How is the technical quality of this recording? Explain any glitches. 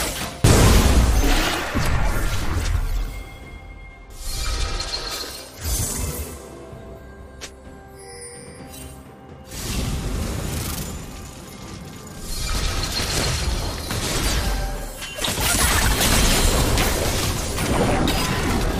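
There's one glitch, right at the start. At about 0.44 s there's a single flash of damaged data in a compressed stream: some bytes in the encoded file were corrupted, so the decoder misread that frame, lost sync, and hunted for the next frame header, leaving a brief, abrupt blip.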